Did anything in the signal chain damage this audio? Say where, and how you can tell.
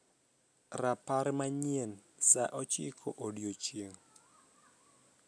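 No. Nothing in this speech recording shows signal-chain damage.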